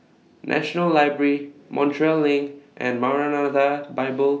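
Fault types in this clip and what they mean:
No faults can be heard anywhere in this recording.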